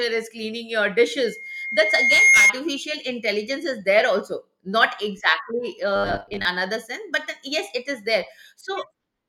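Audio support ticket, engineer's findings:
Loudspeaker feedback squeal, 1.19 to 2.53 s, after "is cleaning your" and clearing before "intelligence is there". Single 2.1 kHz tone swelling over roughly a second to about 10 dB above the speech. Mic capturing its own monitor speaker; loop gain above unity at 2.1 kHz. Unlike a buffer fault, the tone runs independent of the speech.

Robotic sound from repeated short buffers, 5.96 to 6.45 s, right after "not exactly". Rigid metallic 100 Hz buzz only roughly following the speech. Likely a starved playback path repeating about 10 ms blocks, with around half the audio replaced. Distinct from feedback: low, fixed-rate buzz, no growing standalone tone.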